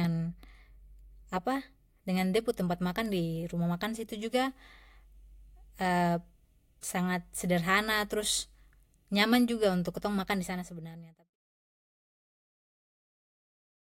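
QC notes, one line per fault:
No faults are heard in this speech clip. The level eases down in a smooth fade out from about 10 s, reaching silence at 11.37 s with no click or hard edge.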